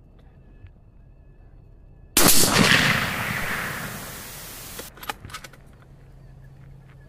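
From 2.65 s to 4.89 s the audio shows low bit depth with dither: the signal is carried with only about 7 bits, and dither noise was added before the samples were rounded. That trade turns the coarse rounding error into a steady, random hiss instead of gritty distortion that tracks the sound. The hiss sits roughly 20 dB below the signal, is even and constant across the section, and stops as the full resolution returns.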